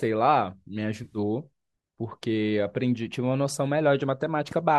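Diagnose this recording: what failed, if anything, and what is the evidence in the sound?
AAC frame loss with concealment, network stage: between 1.04 and 1.18 s, 80 ms of frames drop in short runs, refilled from the last good spectrum as a smeared, phasey patch.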